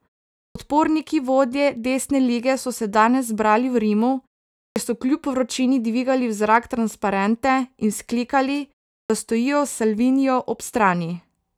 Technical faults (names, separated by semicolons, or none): clipped start after a pause